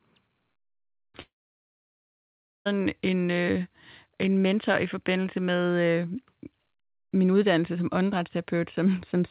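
From 1.22 to 2.67 s the speech gives way to a fading buzz and then about 1.4 s of silence: a long network dropout, likely from lost packets.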